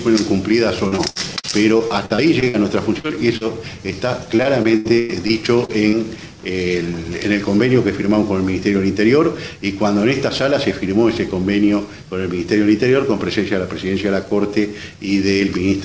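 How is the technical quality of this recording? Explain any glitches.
The recording is marred by packet-loss glitches in the first six seconds, heard through a wideband call path whose spectrum stops at 8 kHz, consistent with G.722.

From 0.88 to 2.56 s and from 4.36 to 5.95 s there is repeated packet loss (robotic sound). The first stretch has 11 gaps and the second has 8, with the longest lasting about 0.1 s. Each gap is patched by extending the last sound, so the audio turns choppy, with pieces missing. On a spectrogram this shows as smeared, repeated harmonic slices, and on the waveform as copied cycles.

Short concealed packet loss occurs at 3.00–3.06, 3.08–3.11 and 3.37–3.42 s. Brief holes were filled and then blended back, which sounds like a quick smear or wobble. These appear as small blurred patches in the spectrogram.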